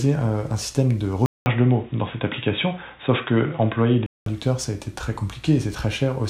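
Input switched to a poorer device from 1.26 to 4.26 s, likely another microphone or a headset call profile. After a 200 ms silence at the switch, the sound turns dull, with nothing above 3.8 kHz and a faint new noise floor, at roughly unchanged level.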